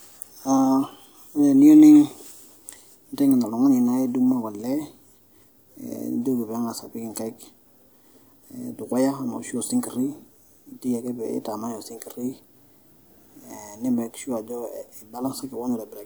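Nothing goes wrong anywhere in this speech recording, so there's no technical fault to point out.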